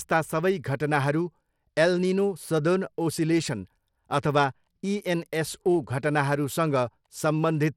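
Bluetooth SBC compression runs through the whole speech clip, and the sound likely passed through an SBC link at a low bit pool, fitting roughly 96 kbps. Starved upper sub-bands leave nothing above 17.1 kHz, while coarse quantisation adds plainly audible grit and flickering treble.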